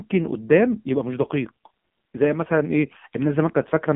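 From start to finish the speech sounds buzzy and synthetic, confined to roughly 150 Hz to 3.6 kHz with nothing above. That is the AMR narrowband mobile codec, heavily damaged, modelling the voice from sparse pulses at a rate pointing to a low mode near 6 kbps.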